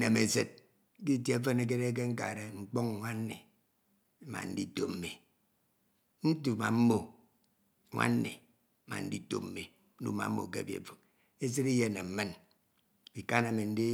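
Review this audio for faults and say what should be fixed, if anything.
Nothing should be fixed, since no faults turn up anywhere in this speech recording.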